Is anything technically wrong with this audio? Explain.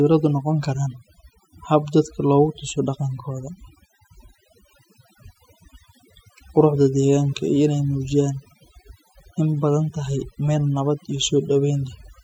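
Yes. Overdone noise removal runs throughout: aggressive suppression gates quiet frequency bands, leaving a lowered background that breaks up into twinkling specks.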